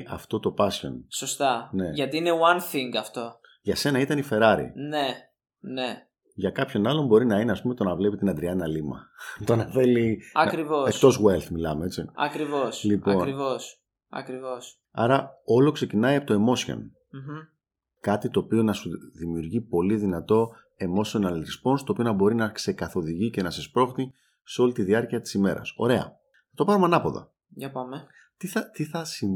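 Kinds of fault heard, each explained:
Damaged data in a compressed stream: corrupted bytes in the encoded audio make the decoder misread frames and lose sync. Right after "σου δημιουργεί πολύ δυνατό", the speech breaks into a short glitch from 20.94 to 20.97 s before decoding resumes.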